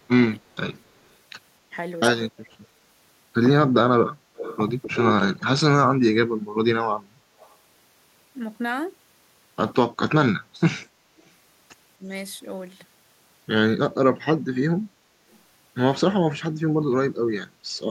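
From 0.0 to 0.65 s and again from 2.36 to 2.61 s, speech is suppressed in double talk. The echo canceller likely could not separate the near talker from loudspeaker echo while both sides spoke, so it turned the speech down. The level dips by up to about 20 dB in the first stretch and about 25 dB in the second, for roughly a third of a second each time, and the speech dips in patches.

From 4.36 to 5.44 s there is echo leak. A loudspeaker-side echo canceller likely failed to remove all of what its microphone picked up, and the remainder was sent back. A copy of the speech trails 262 ms behind it, only about 10 dB down. Fainter scraps with the same 262 ms delay return at 7.39 to 7.56 s, at about 30 dB down, and at 10.8 to 10.88 s and 11.21 to 11.3 s, at about 40 dB down.

From 11.97 to 12.07 s the double-talk suppression returns more mildly. The speech drops by about 10 dB for roughly a tenth of a second.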